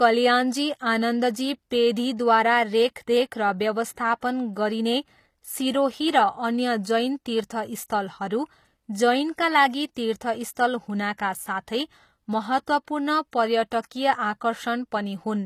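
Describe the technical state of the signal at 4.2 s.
At 4.21 s there is a pre-echo: a short hiss of about 17 ms arrives just ahead of a sharp speech onset, so the attack sounds softened and smeared. The codec spreads quantisation noise across its whole transform block, and when a transient lands late in that block, noise meant for the loud part also fills the quiet gap before it. On a spectrogram this shows as a thin vertical haze of broadband energy preceding the onset; the waveform shows low-level fuzz where there should be silence.

Around that moment, as throughout, the speech carries plainly audible HE-AAC compression, likely the cause of its gritty, lispy s sounds. Only the lower spectrum is coded directly; the treble is rebuilt by copying lower bands upward under a coarse envelope, so harmonics fail to align across the crossover. The damage fits a low bitrate of around 24 kbps. A spectrogram shows a hard ceiling with nothing above 14.9 kHz, and the upper bands look blocky and repeated rather than continuous with the harmonics below.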